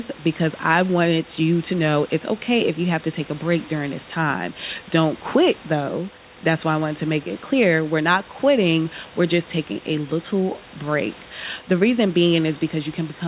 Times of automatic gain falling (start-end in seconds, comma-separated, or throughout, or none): none